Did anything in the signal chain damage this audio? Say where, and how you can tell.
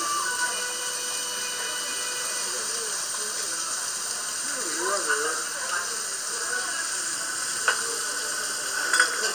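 Yes, at the driver or buffer stage. At 3.01, 5.34 and 8.32 s there's a small jump ahead, with no silence. That's likely a dropped buffer (overrun), where the hardware overwrote samples before they were collected. Roughly 40 ms went first, about 10 ms later.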